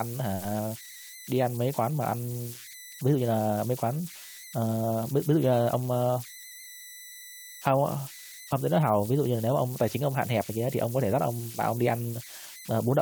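Throughout, converter idle tones leave a whistle around 2 kHz, about 18 dB below the speech. An undithered delta-sigma converter falls into repeating bit patterns, unlike mains hum.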